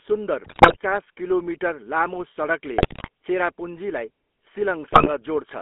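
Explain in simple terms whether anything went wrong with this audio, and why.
The whole recording went through the GSM full-rate codec, an old mobile-phone voice coder that leaves speech thin, buzzy and gravelly, with nothing below about 250 Hz or above 3.5 kHz. GSM bit errors then corrupt the decoder's data at 0.44–0.77 s, 2.78–3.08 s and 4.88–5.09 s, breaking the speech into squawks, pops and gargling.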